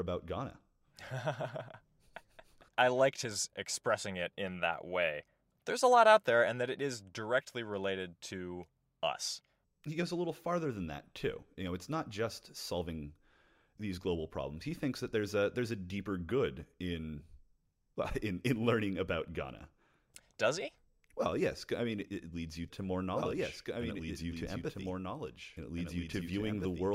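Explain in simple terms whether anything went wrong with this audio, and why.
Something did go wrong near the end. From 23.13 s until the clip finishes, there is a doubled audio track: the same speech plays twice at once, with a second copy trailing about two seconds behind and a bit quieter than the original. That copy switches on abruptly rather than fading in, and it has no echo or room sound of its own. The likely cause is the audio being picked up a second time through a slower route, or an edit leaving two copies out of step.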